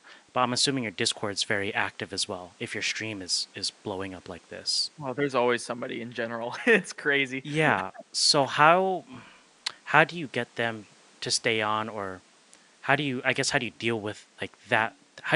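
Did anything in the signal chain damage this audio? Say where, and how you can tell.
No damage anywhere in the chain.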